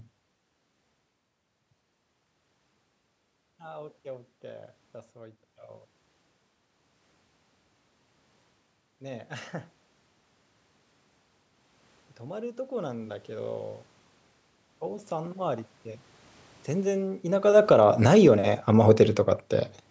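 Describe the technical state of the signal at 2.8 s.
At 2.8 s the signal is intact, with no technical fault at that moment.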